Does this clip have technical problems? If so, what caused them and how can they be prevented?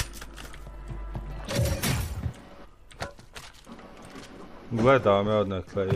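No, nothing here points to a technical problem, so there's no cause to track down and nothing that needs preventing.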